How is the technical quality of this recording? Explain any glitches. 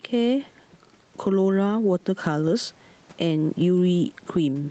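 The recording has one clear problem, and it runs through the whole speech clip: gain pumping. The gain swings by around 10 dB, and the room's background noise sits about 39 dB below the speech. The likely cause is gain set far too high for the microphone, with a fast limiter or compressor clamping down on each loud syllable and letting go in the gaps. Loud and quiet passages are squeezed together, and the sound feels flattened. On a waveform, the speech peaks form an even block. On a spectrogram, the spectrum stops at the call's 8 kHz limit.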